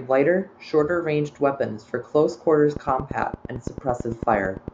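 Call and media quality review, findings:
Train of clicks, 2.77–4.69 s. Regular ticking over the speech at 8.9 per second, roughly twenty same-shaped pulses. Peaks around 10 dB above signal. Likely interference from nearby equipment or a faulty connection or power supply injecting repeated pulses.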